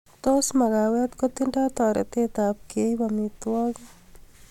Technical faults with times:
none

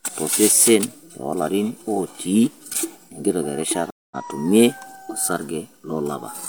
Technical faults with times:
3.90-4.17 stream reconnect

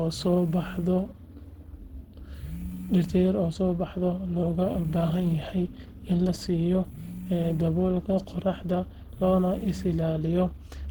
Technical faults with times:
0.00-10.91 Opus compression

